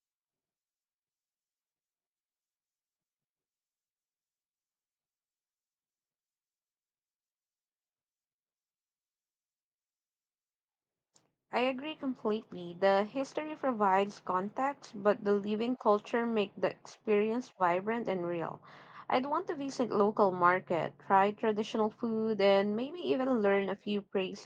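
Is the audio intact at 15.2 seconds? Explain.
Yes, the audio is intact at 15.2 seconds, with no dropout, click or other fault at that moment.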